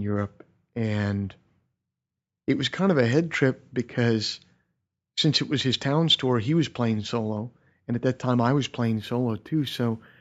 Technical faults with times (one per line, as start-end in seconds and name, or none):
8.84-10.21 imaging from linear upsampling